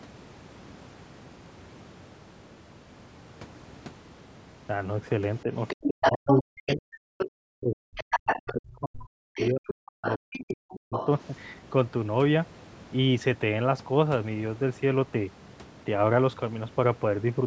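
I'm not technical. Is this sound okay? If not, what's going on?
No. From 5.43 to 6.85 s and again from 7.33 to 10.94 s, the talker's voice sinks to almost nothing in patches. This is speech suppressed in double talk, likely because both people spoke at once and the call's echo control turned everything down together.

A second voice also comes through: from 5.83 to 6.42 s and 7.75 to 8.5 s about as loud as the talker, and more faintly at 7.18 to 7.3 s and 9.34 to 11.22 s. This is the other side's voice leaking through. The loudspeaker's sound likely reached the microphone and wasn't fully removed.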